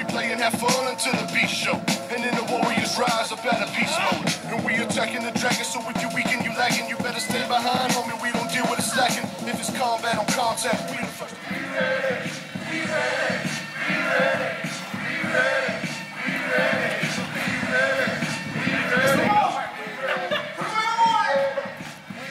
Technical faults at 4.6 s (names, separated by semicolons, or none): drift correction step